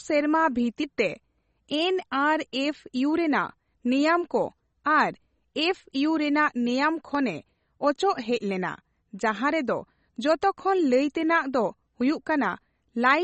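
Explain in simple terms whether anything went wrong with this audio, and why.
Yes, two things went wrong. Throughout the speech there's a dull, watery quality. Sharp s sounds come out smeared or metallic, and the brightest part of the sound is missing entirely, with nothing above about 8.3 kHz. This is most likely MP3 compression at a low quality setting. To save space, the encoder cut off the top of the sound and dropped quieter details, which flicker in and out from moment to moment.

At 7.15 s, and again at 12.01 s just after "ᱞᱟᱹᱭᱛᱮᱱᱟᱜ ᱫᱚ", the speech jumps forward slightly, with no gap of silence. Each time a brief slice of audio, roughly 20 ms, has vanished and the two sides were butted together. This points to a dropped buffer (overrun): the recording program likely failed to collect a chunk of sound before the hardware overwrote it.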